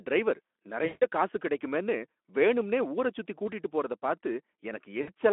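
At 0.85 to 1.07 s, just before "காசு கடைக்குமேனு வேணும்னே ஊரை", about 160 ms of VoIP packet loss concealed by the speech codec: the decoder extends its last pitch and filter into a fading buzzy tone or coloured noise. A shorter 60 ms gap at 5.01 s repeats this over the narrowband Speex line.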